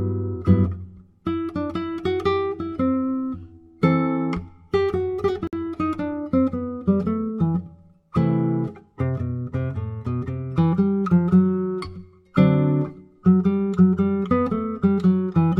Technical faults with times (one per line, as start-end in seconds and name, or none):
5.47-5.53 gap at a join of encoded pieces